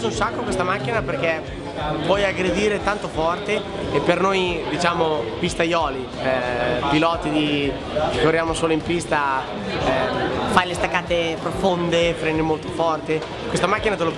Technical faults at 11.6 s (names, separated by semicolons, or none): wrong sample rate